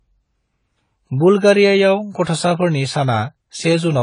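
From start to finish the speech carries AAC compression damage, plainly audible: nothing survives above 10 kHz, so it sounds dull, with smeared, warbling sibilants. The encoder has starved the upper bands and quantised coarsely, likely from an AAC-LC stream at a low bitrate near 24 kbps.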